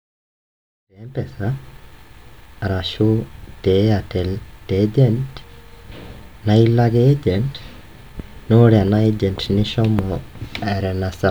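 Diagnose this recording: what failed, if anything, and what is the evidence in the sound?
Nothing in this speech recording points to a failure at any stage, and the smooth fade-in that rises from around 1 s to full level at 1.7 s arrives without a click or hard edge, as a deliberate edit would.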